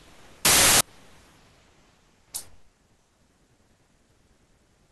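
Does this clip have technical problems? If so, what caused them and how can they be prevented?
Yes. From 0.45 to 0.81 s the speech turns into loud, harsh broadband noise: samples built from the wrong bytes. The reader misassembles each sample's bytes, so the fast-changing low bits become the dominant part of every value. Prevention: verify byte order, offset and alignment when decoding sample data.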